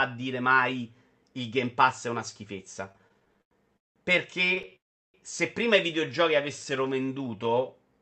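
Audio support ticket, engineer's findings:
Repeated stalls (stutter), 2.89–3.98 s: audio drags and chops, 14 hold-ups, longest 187 ms, about 39% of the span filled with continued sound. Jitter buffer repeatedly running dry on late packets; concealment bridges each gap, nothing lost.

Stutter again, 4.46–4.74 s, just before "se prima i": 7 shorter catches, longest 22 ms, 29% of span concealed. Same underrun pattern, milder.

Call audio freeze, 4.76–5.16 s, right before "se prima i": 0.38 s gap, near-silent for 0.37 s, then resumes intact. Likely packets held in transit emptying the jitter buffer; adds delay, no loss.

Jitter buffer slow-down, 6.06–7.62 s, after "se prima i": sound runs at 87% speed, pitch unchanged, drawn-out, 0.22 s added. Buffer rebuilding reserve by repeating pitch periods and pause fragments.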